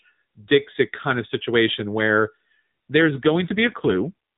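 From 2.98 to 4.14 s there is an AMR rate drop on this narrowband mobile speech. The codec switches to fewer bits per frame. The speech turns rougher and more synthetic. The sound fits a step from 12.2 to 5.9 kbps. The band stays capped at 4 kHz, with no gap.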